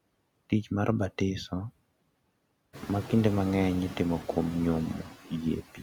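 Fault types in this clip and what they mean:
noise suppressor artifacts: the suppressor keeps pulling down whatever bands it judges to be steady noise, by about 21 dB, frame by frame, so the background drops away between words and comes back up under the speech. This holds even after the room noise rises about 13 dB around two and a half seconds in.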